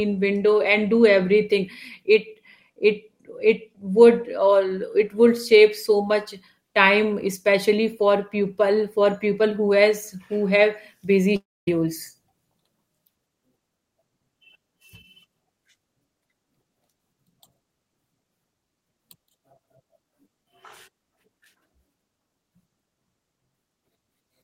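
A speech recording with one long network dropout starting at 11.36 s, right after "who have busy", and lasting until 11.68 s. About 310 ms of audio is simply gone. The last sound is stretched into a fading buzz, then roughly 240 ms of near-silence follows before speech resumes mid-stream. On a spectrogram this appears as a smeared, decaying band collapsing into a dark gap; the waveform shows a tapering tail then a flat line. Likely cause: a run of lost packets concealed by the receiver.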